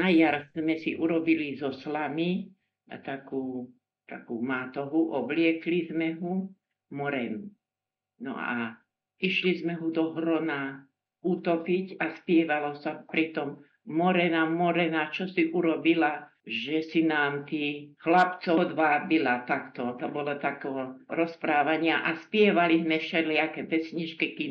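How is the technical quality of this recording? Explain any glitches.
The recording has plainly audible coding damage throughout, plus one brief glitch near the end.

Throughout, the treble sounds watery and swirly, with smeared attacks, most likely from MP3 compression at a low bitrate that fits 64 kbps. Short of bits, the encoder cuts everything above a fixed frequency and switches weak components on and off frame by frame. A spectrogram shows a hard ceiling and flickering, patchy high-frequency blocks.

From 18.54 to 18.58 s there is a short blip from damaged data in a compressed stream. Corrupted bytes made the decoder misread frames and lose sync until it found the next frame header. The waveform shows an abrupt discontinuity, and the spectrogram shows a brief broadband smear.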